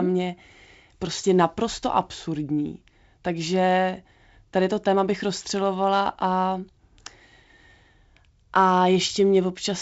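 No technical faults occur at any point in this speech, which comes through G.722 wideband telephone coding at 56 kbit/s with content reaching up to about 7.7 kHz.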